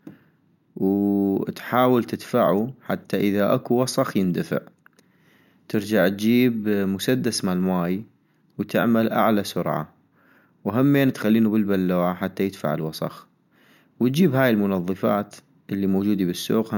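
From start to finish the speech carries imaging from sample-and-hold upsampling: a bright, metallic fizz at about 23 dB below the voice, filling the band from 8 kHz to 16 kHz. This points to 16 kHz material raised to 48 kHz by simply repeating samples with no smoothing filter, so mirrored copies of the spectrum sit above the original band. Unlike steady hiss, the fizz rises and falls with the speech. Unlike aliasing, its copies sit above the original band rather than folding down into it.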